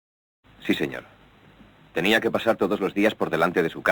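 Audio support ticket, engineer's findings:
No fault found on listening. Smooth fade-in at the head, complete by about half a second, with no click or hard edge.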